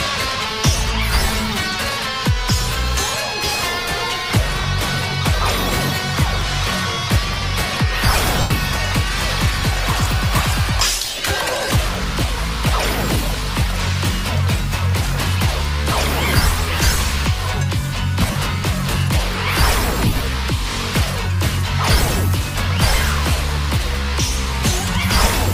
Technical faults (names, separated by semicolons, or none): lost LE Audio frames